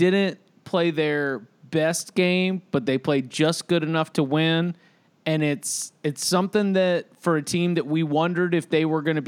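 No audible faults anywhere in the recording.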